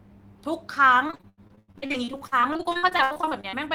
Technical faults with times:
1.07-3.55 repeated packet loss (robotic sound)

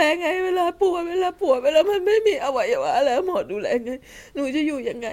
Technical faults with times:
none

